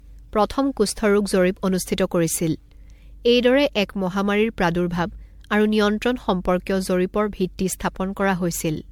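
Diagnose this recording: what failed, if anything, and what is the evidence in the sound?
Codec stage: the speech sounds swirly, smeared and hollow throughout, onsets are blurred, and nothing sits above 19.9 kHz. That is generation loss, likely from about seven MP3 passes near 96 kbit/s, each requantising on a shifted frame grid so artefacts accumulate.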